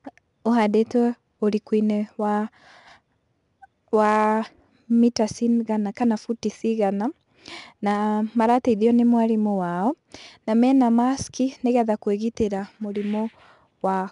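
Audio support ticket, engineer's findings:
4-bit ADPCM compression, whole clip: gritty hiss riding every loud syllable, smeared consonant attacks. Spectrogram shows level-tracking broadband noise floor and a hard cutoff, nothing above 10.6 kHz; waveform shows stepped, lagging onsets. Dulled top fits about 89 kbps.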